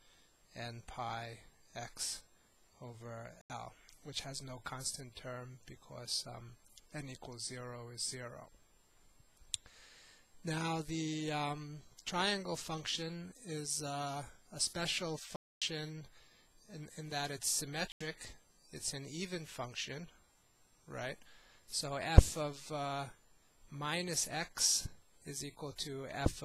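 Blocks of digital silence at 3.41, 15.36 and 17.92 s cut the audio to silence abruptly. The 85 ms gaps fit a missed 4096-sample buffer, and the middle gap lasts 256 ms.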